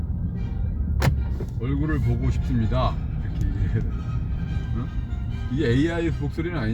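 No technical faults can be heard anywhere in the audio.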